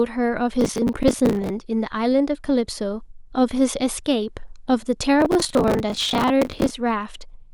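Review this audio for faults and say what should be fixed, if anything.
Processor overload crackle runs from 0.61 to 1.5 s and again from 5.2 to 6.71 s: buffers of around 10 ms missed their deadlines repeatedly and stale audio was replayed, leaving hard-edged fragments heard as gritty crackle over the speech. Prevent it by reducing processing load or enlarging the buffer.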